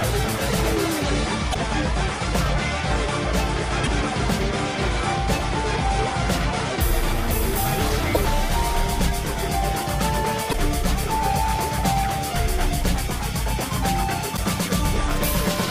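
Brief glitches of about 0.06 s at 1.50, 3.83, 8.11, 10.49 and 14.33 s are damaged data in a compressed stream: corrupted frames throw the decoder out of sync.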